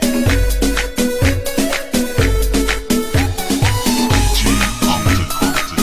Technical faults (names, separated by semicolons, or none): none